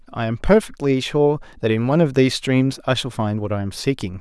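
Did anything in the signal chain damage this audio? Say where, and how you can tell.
No, nothing in the signal chain audibly damaged this speech at any stage.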